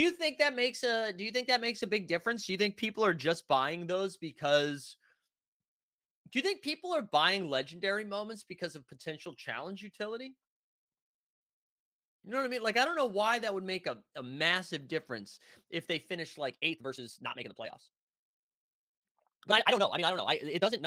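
Right after "difference if they finish", at 16.47 s, the speech jumps into a time-stretched section that runs to the end at 20.87 s. Pace leaps to 1.75 times normal with pitch unchanged, so it sounds rushed, likely from software dropping short slices to squeeze the length.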